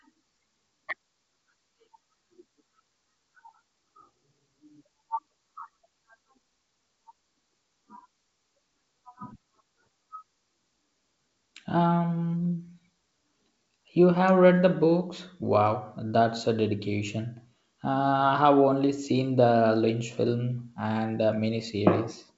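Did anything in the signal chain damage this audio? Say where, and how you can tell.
No, the speech shows no damage from the signal chain: it arrives through G.722 wideband telephone coding at what sounds like 64 kbit/s, with the band ending near 7.7 kHz as that codec's design intends, and at most a faint trace of the coding in the upper band.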